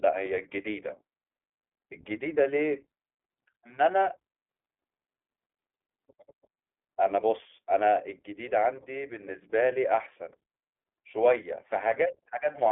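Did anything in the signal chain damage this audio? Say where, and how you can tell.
Yes, at the codec stage: iLBC codec damage runs throughout the speech. A spectrogram shows energy confined to 250 Hz–3.5 kHz and nothing above 3.7 kHz. Coding each 20 ms frame's excitation independently leaves a plainly rough, synthetic texture, fitting the 15.2 kbps mode.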